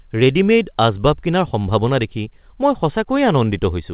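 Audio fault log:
The speech arrives over a call path with nothing above 4 kHz, a telephone-band ceiling that fits a narrowband codec such as G.711 A-law at 64 kbps, and no faults can be heard in the clip.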